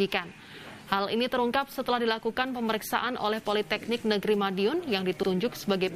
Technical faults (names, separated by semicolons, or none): repeated frames